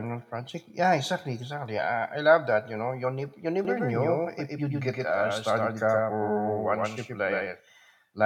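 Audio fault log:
3.65 s to the end, doubled audio track: from 3.65 s a second full-band copy of the speech runs about a tenth of a second behind the first, at roughly the same loudness, so every syllable is heard twice. The copy starts abruptly and never fades or picks up room colour, which sets it apart from an echo or reverberation. The likely cause is the signal being captured again through a slower path.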